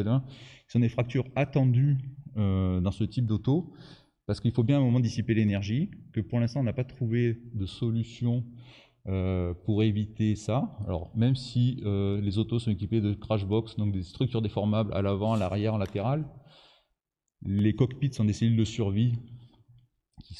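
No faults detected anywhere in the clip; nothing to report.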